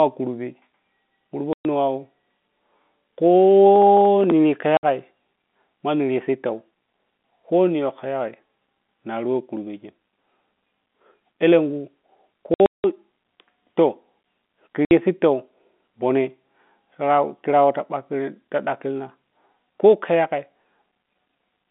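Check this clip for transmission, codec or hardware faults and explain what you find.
Two kinds of fault show up in this telephone-band speech: packet loss filled with silence, and a burst of processor overload crackle.

Packet loss filled with silence hits at 1.53–1.65 s, 4.77–4.83 s, 12.54–12.84 s and 14.85–14.91 s. Lost packets get replaced by dead air, so you hear hard-edged holes of 60 to 180 ms. Those lengths fit 30 ms packets. The 12.5 s stretch is scattered across 300 ms, with its longest run at 180 ms.

Processor overload crackle runs from 3.76 to 4.32 s. The processor misses around ten deadlines on buffers of roughly 5 ms, and each miss replays a scrap of old audio. Together they make a gritty tearing that rides over the speech and clears once the load passes.

The G.711 telephone coding is behind the narrow 200 Hz to 3.6 kHz line sound.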